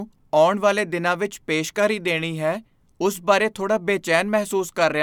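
Nothing in this speech recording stands out as a technical fault; there's no moment where something goes wrong that you'd need to point to.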